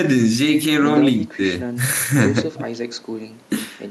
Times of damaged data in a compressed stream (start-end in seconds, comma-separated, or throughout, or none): none